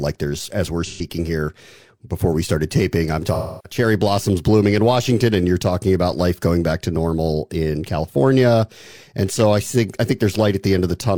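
At 0.85 to 1.04 s and again at 3.34 to 3.79 s, the speech has AAC frame loss with concealment. Blocks of encoded audio went missing, about 128 ms and then about 300 ms of it, consistent with roughly three and then seven lost frames. The decoder patched each gap by reusing the last good spectrum, giving a smeared, noisy or phasey stretch. Unlike a plain dropout, these gaps are filled with sound rather than falling silent.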